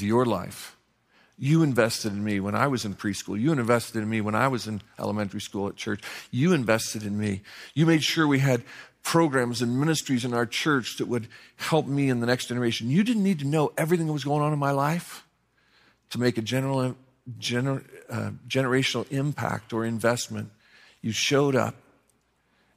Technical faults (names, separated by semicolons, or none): none